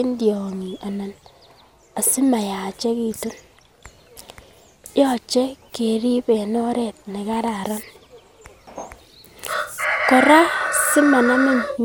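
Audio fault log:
throughout: generation loss. The speech was likely decoded and re-encoded about seven times through a lossy codec, consistent with MP2 at around 128 kbit/s. Each pass requantises on a shifted frame grid, so the sound is swirly, hollow and smeared, attacks blur, and nothing remains above 18 kHz.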